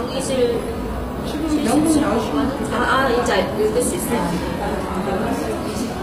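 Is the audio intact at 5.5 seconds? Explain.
No. At 5.5 seconds the sound carries HE-AAC compression damage, present throughout. The treble is rebuilt from copied lower bands, so it sounds gritty and metallic, with nothing above 15.5 kHz. This is likely a low-bitrate encode around 24 kbps.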